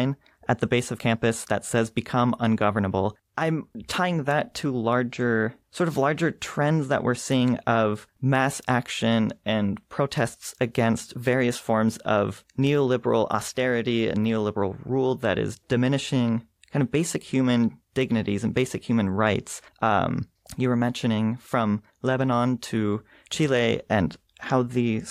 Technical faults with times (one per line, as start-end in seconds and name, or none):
none